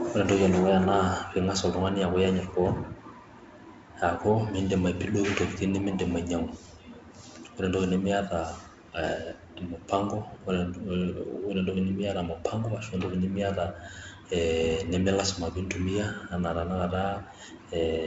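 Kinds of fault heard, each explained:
No faults heard; the speech runs over G.722 wideband telephone coding at 48 kbit/s, with nothing above 7.7 kHz and only light coding noise.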